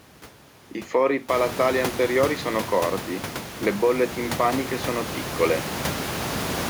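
There are no technical faults in this speech recording; the room noise that rises around a second and a half in is part of the recorded space, not the system.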